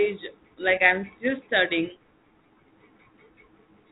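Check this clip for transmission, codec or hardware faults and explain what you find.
No faults are audible in the speech, which arrives over a G.726 ADPCM link at 32 kbit/s carrying only the light coding grain and the 4 kHz bandwidth ceiling that this telephone-grade path imposes.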